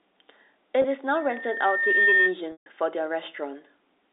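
From 0.82 to 0.84 s the speech briefly holds on a slightly buzzy sustained sound. This is packet loss with pitch repetition: about 20 ms went missing, consistent with one lost packet, and the receiver filled it by repeating the last pitch period.

From 1.14 to 2.36 s a steady 1.8 kHz tone swells over roughly a second into a squeal about 5 dB above the speech. This is a loudspeaker feedback squeal: the microphone picked up its own loudspeaker and the loop gain exceeded one at that frequency.

From 2.52 to 2.66 s a longer buzzy hold fades to silence before the speech returns with a short cross-fade. This is the same packet-loss concealment covering a 140 ms gap, consistent with several consecutive lost packets.

Throughout, the audio is confined to the narrow telephone band of G.711 coding.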